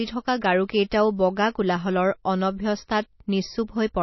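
From the first moment to the end, the speech carries the marks of what's likely MP3 compression. Nothing comes through above 5.8 kHz, so the top end is simply sliced off and the s sounds go dull. The damage is plainly audible: weak detail flickers in and out between frames, giving that watery, swirly texture, which fits an encoder squeezed down to something like 24 kbps.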